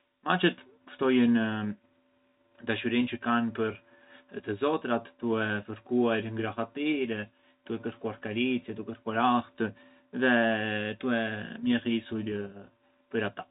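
No technical faults can be heard anywhere in the speech. The telephone band is audible as nothing above 4 kHz, with a faint hiss riding about 38 dB under the voice and following its level, which fits ordinary G.711 A-law coding at 64 kbps.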